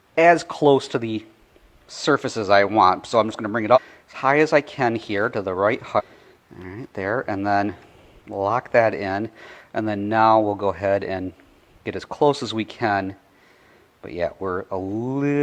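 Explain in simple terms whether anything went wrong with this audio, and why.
Damaged data in a compressed stream, at 3.72 to 3.79 s and 5.95 to 6.01 s: corrupted bytes confuse the decoder, which loses its place and produces brief blips.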